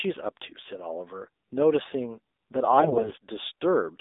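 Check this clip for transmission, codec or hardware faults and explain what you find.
Two faults are present in this speech clip: narrowband mobile coding across the whole recording, and a short burst of corrupted frames near the end.

AMR narrowband mobile codec, throughout: the speech passes only about 250 Hz to 3.7 kHz and is rebuilt from a vocal-tract model fed by sparse pulses. The plainly buzzy, synthetic quality fits a low 7.4 kbps mode.

AMR bit errors, 2.78 to 3.15 s: flipped bits in weakly protected parts of the frames, around 15 percent, misplace the excitation pulses and skew the fine gain and spectral values. Pitch and level roughly hold, but the speech turns hoarse, scratchy and gargly.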